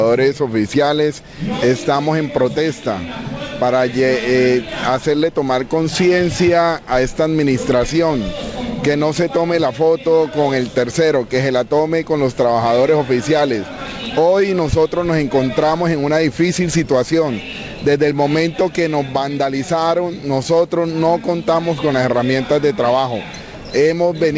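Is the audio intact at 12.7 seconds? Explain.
Yes, at 12.7 seconds the audio is intact, with no dropout, glitch or distortion there, only the steady high-frequency roll-off of the call path, which leaves nothing above about 8 kHz.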